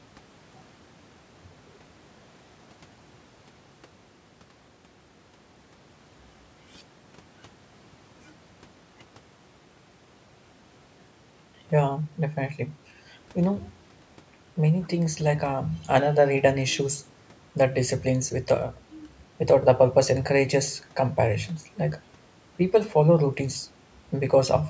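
Nothing stood out on listening to this speech recording, which has passed through ordinary call microphone processing with its normal trimming of the lowest bass and no content above 8 kHz.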